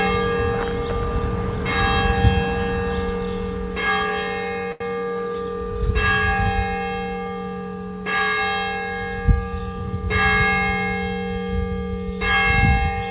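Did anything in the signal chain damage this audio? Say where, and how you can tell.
Yes, at the network and jitter buffer stage: a short stall from a late packet at 4.72 to 4.82 s. The buffer ran dry, so the receiver stretched the last sound for 83 ms, then resumed without losing audio. The waveform shows a repeated, held cycle; the spectrogram shows flattened, smeared bands. The 4 kHz band limit of the call path persists throughout.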